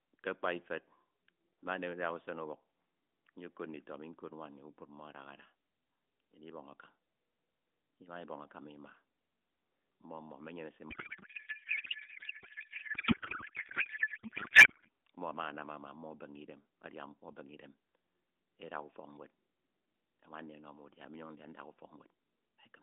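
A codec payload misread runs from 10.9 to 14.9 s. The receiver unpacks octet-aligned AMR frames as if they were bandwidth-efficient, so each field is read from the wrong bits, and the speech collapses into garbled noise and warble that barely tracks it until the packing matches again.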